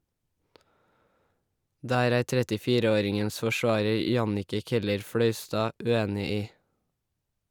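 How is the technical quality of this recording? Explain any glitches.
The recording has one recurring glitch. Periodic USB or driver dropouts occur every 2 s from 1.62 s to 5.61 s: a few roughly millisecond gaps of silence, heard as regular ticks. Their even spacing separates them from random clicks.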